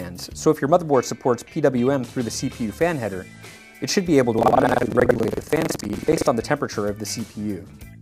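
From 4.37 s to 6.30 s the audio takes on a robotic buzz, a rattle at 21.5 Hz, the signature of buffer tearing. The playback writer and the hardware reader have drifted so they cross within every period, and the repeat rate fits a 2048-sample buffer. About a third of each period carries audio from roughly a tenth of a second earlier, hard-joined at both edges. Unlike an underrun there are no silent gaps, and the rattle follows the signal rather than sounding over quiet.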